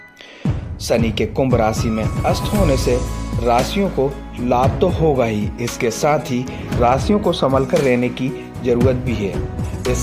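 Nothing in the audio stands out as a technical fault at any point, so there's no problem to point to here.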